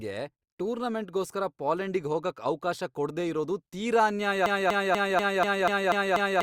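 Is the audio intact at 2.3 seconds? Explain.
Yes, the speech at 2.3 seconds plays through intact, with no dropout, click, distortion or other fault at that moment.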